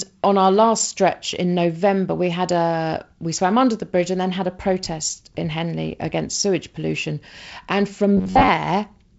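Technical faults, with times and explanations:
8.17 to 8.48 s, robotic sound from repeated short buffers: a rigid, metallic buzz at about 94 Hz, likely caused by most of the audio being skipped and replaced with repeats of roughly 10.7 ms slices. On a spectrogram this appears as flat, evenly spaced harmonic stripes, and the waveform shows identical cycles repeating.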